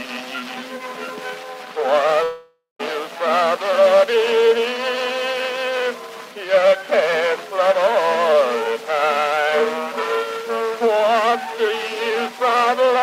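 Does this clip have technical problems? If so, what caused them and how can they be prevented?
Yes. From 2.23 to 2.81 s, a long network dropout (likely lost packets) leaves a fading buzz, then about 150 ms of silence. A spectrogram shows smeared bands ending in a blank gap. A steadier connection with a larger jitter buffer and packet redundancy would prevent it.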